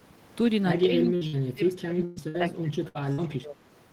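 A speech recording whose level keeps sagging and breaking up from 0.82 s to 3.61 s, with around two seconds of it affected and the deepest dips reaching roughly 25 dB down. The voice thins and drops out in patches, the pattern of speech suppressed in double talk: the far side was likely talking at the same moment, and the echo canceller, unable to tell this talker from its loudspeaker echo, pulled everything down. Laid over this are six bursts of packet loss, at 1.15 to 1.24 s, 1.27 to 1.36 s, 2.05 to 2.19 s, 2.28 to 2.37 s, 2.88 to 2.98 s and 3.13 to 3.21 s. In each, the last sound is stretched into a fading buzz or hiss for about 50 to 65 ms, or 115 ms in the 2.05 s burst. The speech then jumps ahead, having lost about 60 ms of audio, or 120 ms at 2.05 s, because the receiver concealed the late or missing packets before resuming.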